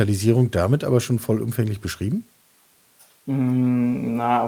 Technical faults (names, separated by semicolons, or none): none